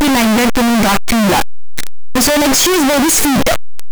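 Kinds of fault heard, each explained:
Signed and unsigned mixed up: Throughout the speech there is a very loud, harsh distortion, and quiet stretches come out as loud as the rest. The likely cause is 8-bit samples read with the wrong sign convention, flipping the top bit so each zero crossing leaps across the whole range. A waveform shows the trace jumping back and forth across its whole range, and a spectrogram shows dense broadband energy through the speech.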